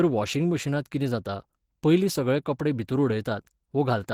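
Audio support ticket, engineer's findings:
Opus compression, whole clip: plainly audible hoarse, grainy roughness on the speech, with less MP3-style swirl because starved bands are filled rather than left empty. Likely hybrid mode from a low rate near 16 kbps. Bandwidth not narrowed; content reaches 20.2 kHz.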